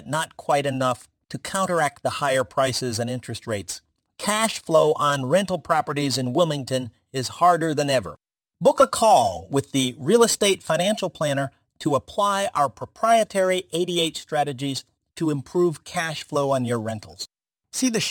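Throughout, crude rate conversion drops samples without filtering, which fits a 48 kHz to 44.1 kHz change, leaving a gritty inharmonic fizz roughly 25 dB below the speech.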